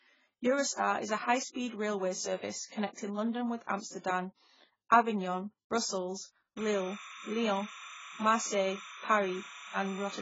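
From the start, the speech is dull and smeared, with nothing above 7.7 kHz. Sibilants and held sounds warble and fizz. The damage is heavy. The likely cause is AAC compression at a very low bitrate, which fits about 12 kbps.

At 6.57 s, timecode bleed starts and runs to the end. A steady chirping warble sits about 15 dB below the speech. It flips between tones near 1 kHz and 2 kHz, a pattern that fits linear timecode at 30 frames per second.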